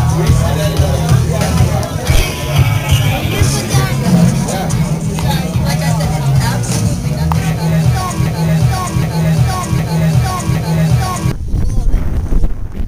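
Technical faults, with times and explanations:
8.26–11.31 s broken-record loop: a 0.76 s fragment repeats four times, likely from a stalled stream resending its last piece; waveform and spectrogram show identical tiled blocks.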